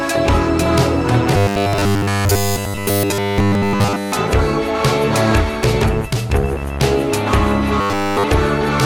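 A music clip where the audio likely stopped arriving in time, so playback kept looping one 10 ms buffer. That produces robotic sound from repeated short buffers, a rigid 100 Hz metallic buzz replacing the music from 1.37 to 4.12 s and again from 7.81 to 8.24 s.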